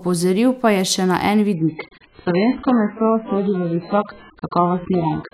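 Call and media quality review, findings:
Speech abruptly dull and swirly from 1.54 s to end, no gap; nothing above 4.6 kHz. Component: adaptive stream at a lower bitrate. Player switched rendition as connection slowed; fits AAC dropping from about 96 to 9 kbit/s.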